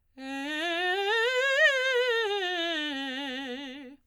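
Music, with no audible technical faults anywhere in the clip.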